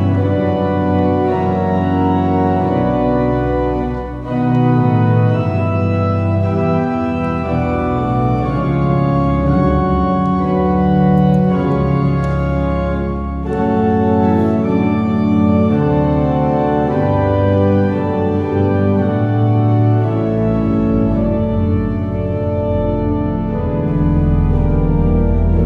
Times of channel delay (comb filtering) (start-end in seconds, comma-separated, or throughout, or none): 22.84-23.88